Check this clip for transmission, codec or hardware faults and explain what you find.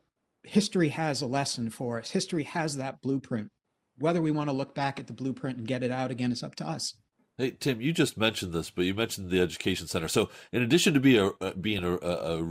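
The speech carries DAB burbling twice, from 5.09 to 5.33 s and from 11.79 to 11.84 s. Residual bit errors corrupt MP2 sub-band samples and scale factors. The result is short blips of noise in single sub-bands and brief level jumps, which show on a spectrogram as isolated blocky bands flaring for single frames.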